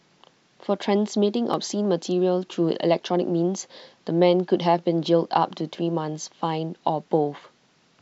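At 1.54 s and again at 5.75 s the speech jumps forward, with no gap. That's most likely a dropped buffer (overrun): samples weren't collected in time, so a few milliseconds got overwritten and the edges were spliced straight together.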